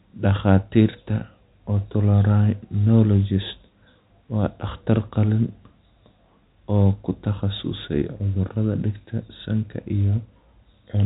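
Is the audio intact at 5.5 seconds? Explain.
No. At 5.49 s, right after "waa dhakhtar qalliin", there is a single sharp click. The likely cause is dropped samples: a handful of samples, a fraction of a millisecond, go missing. The waveform jumps abruptly, and the spectrogram shows a thin vertical line.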